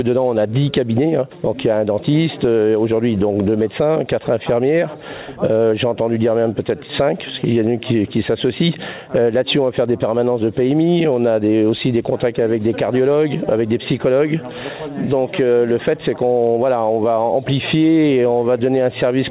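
Gain pumping runs throughout. The gain swings by roughly 10 dB, leaving levels squashed together. Unlike a noise gate, the gain is pulled down rather than cutting out, likely a fast limiter fighting excessive input gain.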